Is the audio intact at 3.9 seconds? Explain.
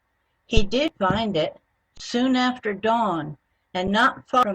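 No. At 3.87 s there is an underrun with held sample lasting about 6 ms. The output buffer ran empty, and the converter held its last value. The waveform goes flat and the sound briefly stops. Nothing seems lost. Playback resumes where it stopped, so the return is soft.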